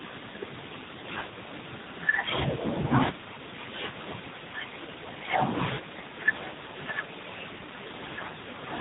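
From start to finish the speech has been squeezed through the AMR narrowband mobile codec at a low mode that sounds close to 8 kbps. Everything above 4 kHz is gone, so the voice sounds dull and boxed-in, and the sparse pulse model leaves it plainly buzzy and synthetic.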